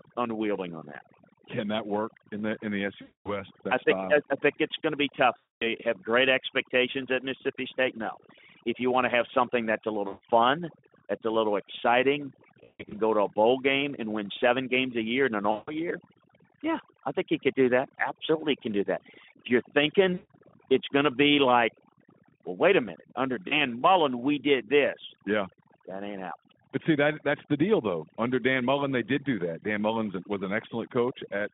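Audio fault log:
Throughout: overdone noise removal. The background drops and breaks up into twinkling specks. The noise reducer is set too hard. It pulls individual frequency bands down or out whenever they sit close to its noise estimate. Quiet parts of the voice fall under that line and vanish with the noise. The bands left behind flicker on and off, which makes the specks.
3.01–3.44 s, 5.39–5.77 s, 10.07–10.21 s (after "have something that's a"), 12.64–12.94 s, 15.51–15.75 s, 20.13–20.31 s (before "it's going to be"), 23.48–23.58 s (after "wait a minute under"): VoIP packet loss concealed by the speech codec. Gaps of about 240, 240, 140, 200, 160, 160 and 40 ms are filled with a fading buzzy tone or coloured noise. At 12.6 s the losses are scattered over 280 ms. The decoder replays its last pitch and filter at falling gain. The voice stays weak briefly after each gap.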